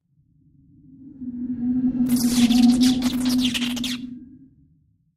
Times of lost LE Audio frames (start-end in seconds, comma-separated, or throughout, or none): none